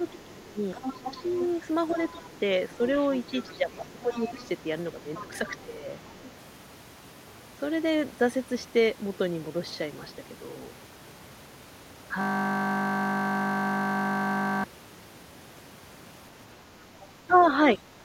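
From 0.0 to 2.22 s the speech is repeatedly pulled down, for about 0.7 s in total, by about 15 dB at its deepest. This is speech suppressed in double talk. The likely cause is an echo canceller that could not tell the local talker from loudspeaker echo and turned both down.

From 0.74 to 6.32 s a second voice sits underneath, about 15 dB below the main speech. This is the other side's voice leaking through. The canceller likely failed to remove all of the far side from the microphone.

From 3.49 to 5.83 s the suppression returns. About 1 s of speech is affected, again by about 15 dB at its deepest.

From 12.21 to 14.64 s a system hang loop replaces the audio. One 20 ms piece repeats 121 times. At 50 Hz that gives a steady buzz. The system froze while the hardware kept cycling one buffer.

From 16.78 to 17.95 s the speech dips again, about 0.3 s in total and by about 10 dB at its deepest. 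Within that span, from 17.01 to 17.44 s, the far-side voice leaks through about 25 dB below the speech.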